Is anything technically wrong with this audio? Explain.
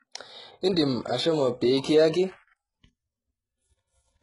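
Yes. Throughout the speech there is heavy damage, with the treble reconstructed rather than recorded. This is likely HE-AAC compression at a very low rate, which fits a bitrate around 12 kbps. The codec sends only the lower spectrum and synthesises the upper bands by copying lower content upward under a coarse envelope. The result is that s sounds turn gritty and metallic. On a spectrogram, the top bands show repeated, smeared patterns that do not match the harmonics below, and everything stops at a hard ceiling near 11.1 kHz.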